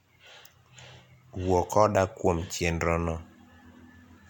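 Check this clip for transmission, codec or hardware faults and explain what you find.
No transmission, codec or hardware faults are audible here.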